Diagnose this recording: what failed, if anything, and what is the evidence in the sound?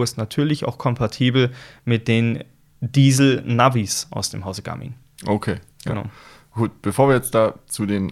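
Nothing in the signal chain has failed: the speech arrives continuous and stable, with no dropouts, level jumps or added noise at any stage from capture to playback.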